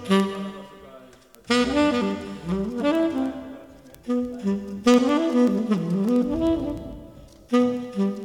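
From 0.12 s to 8.23 s the audio carries word clock ticks: a receiver running on its own clock, unlocked from the sender's, slips against it by something like 300 ppm, so a single sample is dropped or repeated roughly every 0.07 s. The result is around a hundred sharp ticks at a steady pace, uneven in strength. On a spectrogram they form a regular comb of thin vertical broadband lines; the waveform shows one-sample jumps.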